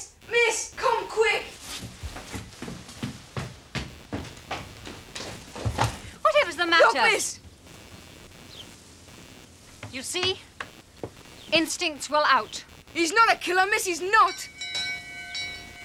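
Processor and peripheral load shifts disturb the shared audio ground, producing computer activity noise: a buzzing pulse of roughly 100 Hz, about 25 dB below the sound, throughout.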